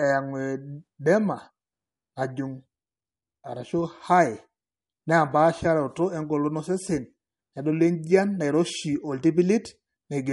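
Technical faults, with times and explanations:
Throughout, MP3 compression: treble stops near 11.2 kHz and faint detail swirls audibly, likely from an encoder short of bits, fitting roughly 48 kbps.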